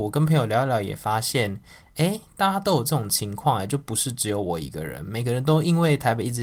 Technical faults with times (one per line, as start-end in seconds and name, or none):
none